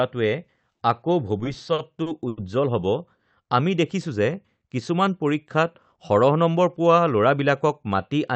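Repeated stalls (stutter) run from 1.39 to 2.39 s. Packets reached the receiver late or more slowly than the speech was being played, so the jitter buffer ran dry eight separate times in that second. Each time, the receiver stretched the last sound to cover the wait, filling about 220 ms in all, roughly a fifth of the span, with the longest gap near 90 ms. No speech is lost, but the passage drags and hiccups.

A jitter buffer speed-up follows from 5.98 to 6.63 s. The buffer had built up more audio than it aims to hold, so the receiver trimmed short pitch-period slices again and again, about 50 ms in total, to bring the delay back down. The speech runs at about 108% speed with its pitch unchanged, so this stretch sounds slightly hurried. Throughout the clip, the high end of the call audio stops at about 8 kHz.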